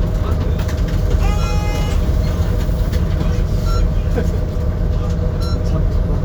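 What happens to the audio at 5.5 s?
Nothing goes wrong at 5.5 s; the sound there plays through intact, with no dropout, click, distortion or other fault.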